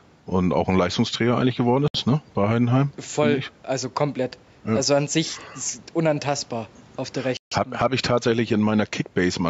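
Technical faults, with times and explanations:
Throughout: gain pumping. Loud and soft parts are pulled closer in level, with the gain swinging around 10 dB. The level is squashed flat. The likely cause is gain set far too high, with a fast limiter pulling it down on every peak.
1.88 to 1.95 s and 7.37 to 7.52 s: Bluetooth stall. The sound drops to silence for 66 ms after "eigentlich geworden", then for 146 ms after "ist unantastbar auf der". A likely cause is interference delaying packets until the headphone buffer ran empty.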